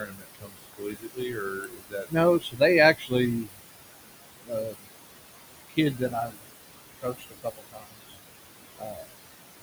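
Speech over room noise that sits about 11 dB below the voice shows noise suppressor artifacts throughout. The background is pulled down about 19 dB between phrases, leaving a residue that appears as patchy, flickering speckles on a spectrogram. Speech cut by the noise suppressor occurs at 0.0–2.61, 2.94–3.62, 4.45–4.89, 5.69–6.41, 6.98–8.16 and 8.78–9.1 s. There, soft sounds mistaken for noise are dropped by about 20 to 22 dB, seen as missing consonant energy and abruptly shortened word tails in the waveform.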